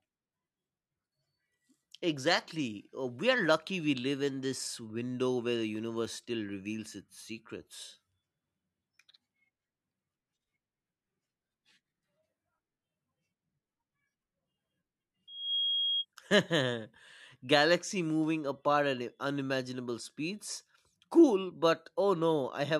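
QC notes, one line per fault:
15.27–16.05 s, loudspeaker feedback squeal: the microphone picks up its own loudspeaker, and the loop gain passes unity at 3.3 kHz, so that frequency feeds itself. It swells over roughly a third of a second into a piercing tone about as loud as the speech.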